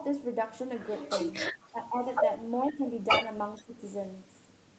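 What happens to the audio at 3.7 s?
An echo canceller likely struggled with both sides talking at once, so the speech is suppressed in double talk from 3.61 to 3.8 s, dipping deeply, by roughly 15 dB. Just before, from 3.57 to 3.63 s, an echo leak likely lets through a very faint copy of the speech, delayed by about 461 ms.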